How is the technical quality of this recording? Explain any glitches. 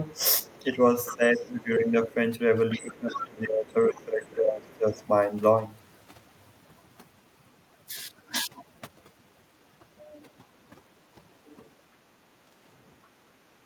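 The technical quality is poor. Heavy noise processing runs through the whole recording, and the first five seconds have two stretches where the speech is pulled down while a second voice bleeds in. There is also a brief drop in the background near the end.

Overdone noise removal is present from start to finish. The suppressor pushes individual frequency bands to near zero whenever they sit close to its noise estimate. The low-level parts of the speech get removed along with the noise. The background drops and breaks up into twinkling, warbling specks.

Speech suppressed in double talk occurs from 0.12 to 2.12 s and again from 2.73 to 5.02 s. The likely cause is an echo canceller that could not tell the near talker apart from loudspeaker echo while both sides were speaking, so it attenuated everything. In the first stretch, about a second of the speech dips by roughly 10 dB at the deepest point. 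The second stretch is worse, with around two seconds affected and drops near 20 dB.

The other side's voice leaking through is heard from 0.44 to 1.40 s and from 2.71 to 5.06 s, overlapping the suppressed stretches. This likely comes from far-end audio on a loudspeaker that the echo canceller failed to fully remove from the microphone. The leaked voice sits well below the main speech, roughly 15 dB down in the first stretch and about 20 dB down in the second. It comes across as a faint second talker underneath.

Background gated by the echo canceller occurs between 11.81 and 13.25 s. The canceller clamped the microphone hard while the loudspeaker was active. For around 0.7 s in total, the room sound drops by about 11 dB, leaving momentary holes in the ambience. It returns once the canceller releases.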